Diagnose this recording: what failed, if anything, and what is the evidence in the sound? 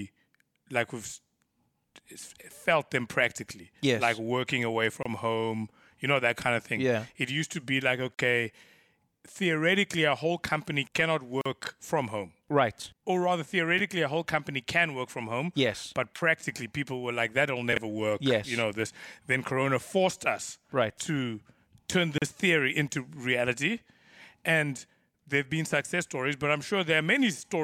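Codec stage: gaps at joins of encoded pieces at 5.03, 8.14, 11.41 and 22.18 s. Silences of 26 to 47 ms come from untrimmed encoder delay and padding.

Buffer stage: chunks out of order at 13.78 and 17.73 s. Jumbled moments come from 11.6 ms chunks played one and three chunks late.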